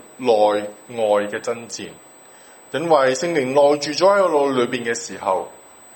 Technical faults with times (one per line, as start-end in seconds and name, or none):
0.00-5.96 USB whine